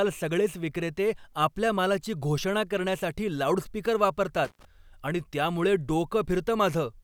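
At 4.45 s, just after "मालाची घोषणा करण्यासाठी लाऊडस्पीकर", the speech suffers an intermittent contact lasting until about 4.65 s. A loose connector in the signal path briefly loses contact, so the audio drops out for roughly 88 ms. Crackle marks the break and the reconnection, and while the line is open faint hiss remains. Normal signal returns before "आणि त्यामुळे".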